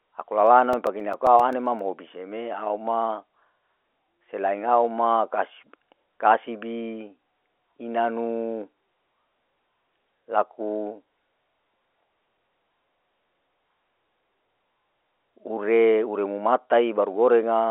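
From 0.47 to 1.79 s come CD scratch ticks: eleven brief clicks, about eight a second, as a disc blemish defeats error correction once per rotation.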